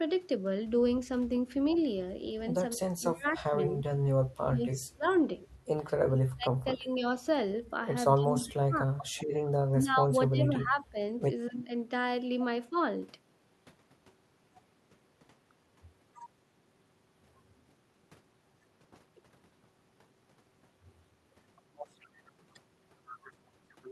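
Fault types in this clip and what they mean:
Speech suppressed in double talk: the voice dips by up to about 30 dB between 2.76 and 12.76 s, likely an echo canceller ducking crosstalk. These are level drops, not abrupt packet-loss gaps.
Echo leak: at 5.09 s a faint copy returns about 30 dB down and 280 ms late, likely uncancelled loudspeaker pickup, heard as a distinct repeat rather than room reverb.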